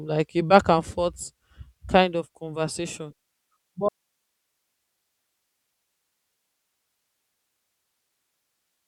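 An audio dropout to a faint residue begins at 3.89 s in this speech recording and lasts to the end of the clip. The signal cuts out abruptly in mid-flow rather than pausing or fading, and only hiss remains, sitting roughly 55 dB below the level of the speech. The likely cause is the source being lost upstream while the rest of the chain stayed live, so the open path carries its own noise floor.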